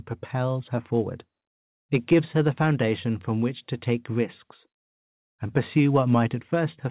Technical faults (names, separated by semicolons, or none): none